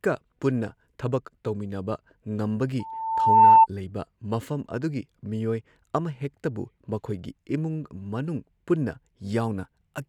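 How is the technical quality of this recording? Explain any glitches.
The recording has one clear fault, a loudspeaker feedback squeal. It runs from 2.79 s to 3.67 s, just before "ꯂꯩꯕ ꯃꯐꯝ". A single tone at 895 Hz swells over about three-quarters of a second. It ends up roughly 15 dB louder than the speech. The microphone was picking up a loudspeaker it fed. Near 895 Hz the loop gain passed one, so that frequency fed on itself and kept growing. Then the squeal stopped.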